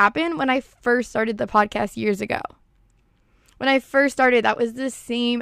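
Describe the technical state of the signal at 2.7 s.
At 2.7 s the signal is intact, with no dropout, clipping, noise burst or other fault to be heard at that moment.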